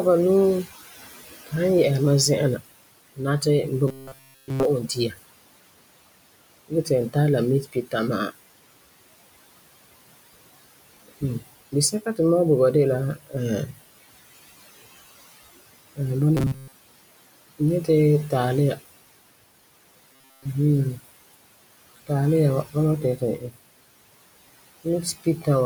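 Throughout, a noise suppressor pulls the room noise down by about 19 dB, leaving it pumping between and under phrases. From 3.88 to 4.65 s, a buffer likely starved and had to be refilled by repeating roughly 7.5 ms chunks, which turns the voice into a rigid metallic buzz at 133 Hz. From 4.81 to 5.18 s, the suppressor mistook part of the speech for noise, cutting it by up to about 14 dB so that it sounds faint and swallowed. The same speech cut recurs from 7.63 to 7.94 s, just after "tara la", at about 14 dB, and from 13.15 to 13.34 s, after "bo ba de la", at about 17 dB. The same 133 Hz robotic buzz from repeated short buffers returns over most of 16.37 to 16.74 s and throughout 20.13 to 20.46 s. A final speech cut of about 16 dB falls between 25.24 and 25.47 s.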